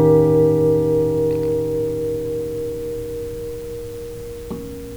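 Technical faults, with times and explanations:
Throughout, mains buzz: a steady, raspy buzz sits around 35 dB below the main sound. It comes from sharp switching spikes on 60 Hz power, two per cycle, whose harmonics of 60 Hz extend up to several kHz, giving it an edge rather than a hum.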